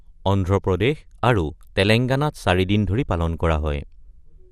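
From start to finish the speech has a dull, gurgling, granular quality, with the top end flickering in and out. That points to MP2 compression, likely squeezed to a rate around 80 kbps, where upper sub-bands get switched off and the remaining ones are coarsely quantised.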